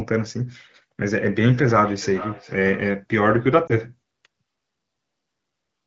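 From 1.04 to 3.03 s, feedback echo between two devices: a second device replays this audio, which is picked up again, returning at roughly 0.4 s intervals, about 16 dB below the speech. At 3.67 to 3.74 s, lost AMR speech frames: a brief dip or warble, consistent with a single concealed frame, over the light coding damage of the AMR-WB codec.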